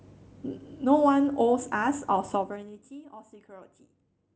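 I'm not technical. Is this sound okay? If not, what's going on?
No. Between 2.30 and 2.94 seconds the speech is turned well down in small jumps, about fifteen a second, instead of one smooth slide. Each jump leaves a tiny click, so you hear zipper noise, a fast ticking that rides on the voice as it fades.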